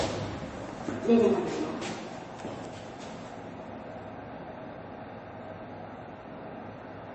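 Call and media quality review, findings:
MP3 compression artefacts, full clip: plainly audible watery, swirling texture; nothing above 8.3 kHz. Likely low-bitrate MP3 encode, consistent with about 32 kbps; encoder cuts treble at fixed frequency, weak spectral lines drop in and out between frames; attacks smear.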